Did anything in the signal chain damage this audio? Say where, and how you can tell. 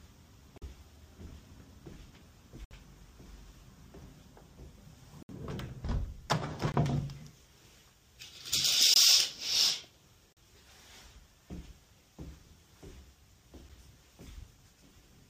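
Yes: blocks of digital silence at 0.58, 2.65, 5.23, 6.72, 8.94, 10.33 and 13.69 s, from 7 to 64 ms long. The driver or buffer stage failed to fill output buffers in time. The 21 and 43 ms gaps fit 1024- and 2048-sample blocks.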